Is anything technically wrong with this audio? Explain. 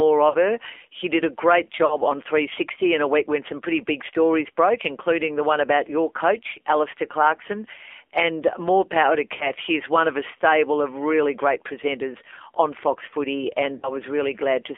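Yes. Throughout, the voice is thin, buzzy and synthetic-sounding, confined to roughly 300 Hz to 3.5 kHz. This is the AMR narrowband mobile codec at a low rate, consistent with about 7.4 kbps. It rebuilds speech from a vocal-tract model and sparse pulses, so detail is plainly damaged.

At 0.30–0.37 s, 1.86–1.97 s, 9.36–9.49 s and 13.78–13.91 s, there are brief warbling dips where the speech smears and fades before recovering roughly. These are lost AMR speech frames. About 40 ms goes missing each time, which fits two 20 ms frames, and the decoder patches the gap by repeating the last good pitch and vocal-tract settings at falling gain.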